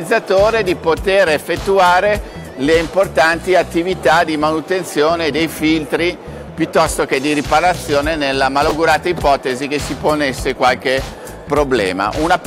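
Chunks out of order at 8.69 to 8.71 s: a 10 ms chunk of audio arrived one chunk late and was played after the chunk that should have followed it, so two neighbouring 10 ms pieces swap places. Nothing goes missing, but the waveform is stitched together in the wrong sequence, leaving three hard joins in quick succession. The result is a brief jumbled flicker at that point.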